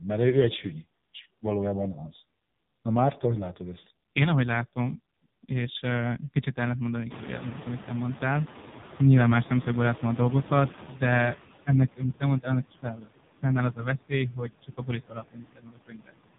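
Across the whole recording, heavy AMR narrowband mobile codec damage is audible: the speech sounds buzzy and synthetic, and the background swirls. On a spectrogram everything stops sharply near 3.8 kHz, and the harmonics look smeared and blocky, which fits AMR-NB running at a very low bitrate, around 5.15 kbps.

Noise suppressor artifacts also run throughout. The suppressor lowers bands it judges to be steady noise by about 17 dB, frame by frame, so the background drops away between phrases and swells under the speech. A spectrogram shows the gaps pumping between dark and speckled.

At about 7.0 s, just after "és kicsit ellent mondani", the room noise jumps by about 22 dB and ends up roughly 16 dB under the speech. The noise suppressor is catching up from 7.1 to 11.36 s. Its estimate lags, so the louder noise first comes through with less reduction, then fades over about 4.3 s to a cut of about 12 dB. 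The waveform floor steps up, then slowly tapers.

Speech is cut by the noise suppressor three times. From 10.88 to 11.02 s, a brief stretch of speech sinks by up to about 10 dB. From 12.71 to 13.09 s, right after "te mondtál annak", the deepest cut drops speech by up to about 17 dB. From 14.32 to 14.89 s, speech falls by up to about 13 dB. These parts sound swallowed, and the waveform shows sudden dips in the envelope.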